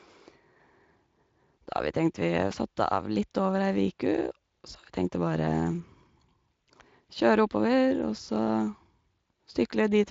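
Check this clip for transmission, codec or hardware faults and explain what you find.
Nothing in the recording stood out as a problem on listening.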